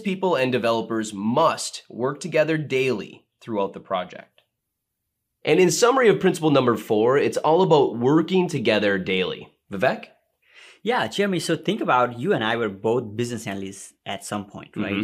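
A speech recording with a single sharp click at 9.85 s, likely from dropped samples: a couple of samples vanish and the waveform jumps, but unlike a dropout, no audible sound is lost.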